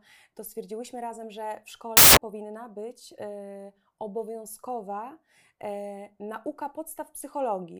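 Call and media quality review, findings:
Samples built from the wrong bytes, 1.97 to 2.17 s, after "stwierdziłyśmy razem że w", before "powinna być". Loud harsh broadband noise burst. Probable component: PCM reader or byte unpacking, with byte order or alignment off. Low bits land as high bits. Spectrogram shows a flat full-band noise block, and the waveform looks large and dense.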